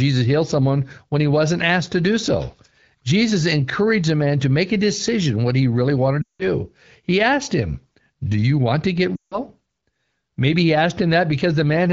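At 6.22 to 6.44 s and 9.16 to 9.39 s, lost AMR speech frames leave gaps of about 180 ms and 160 ms. The decoder repeats the last good pitch and vocal tract settings at falling gain, so the sound drops to near silence within two frames, and returns briefly rough.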